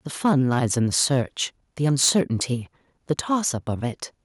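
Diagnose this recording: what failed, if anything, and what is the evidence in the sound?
Harsh crackle hits the loudest syllables at 0.25–0.65, 0.97–1.21, 1.84–2.21 and 3.10–3.13 s. It is worst where peaks overshoot by about 7 and 6 dB. The likely cause is microphone overload at the converter: input gain set too high, so waveform tops are sliced flat.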